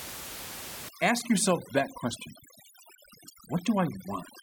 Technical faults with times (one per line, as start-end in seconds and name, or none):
0.89-4.42 overdone noise removal